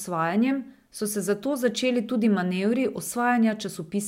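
Nothing goes wrong anywhere in this bit of speech, so there's no fault to walk through.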